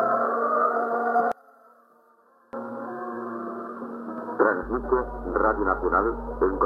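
From 1.32 to 2.53 s the sound collapses about 28 dB to a faint residue, likely one channel inverted, so shared content cancels in mono.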